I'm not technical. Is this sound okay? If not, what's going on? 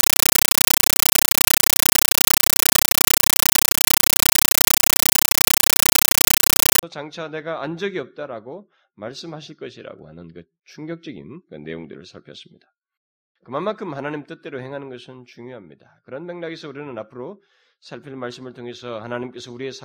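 No. From 0.0 to 6.83 s this is a compressed stream played as audio: undecoded Dolby Digital data sent as ordinary sound. Unlike random static, it is very loud, chattering bursts about 31 times a second, each about 9 ms, completely replacing the speech.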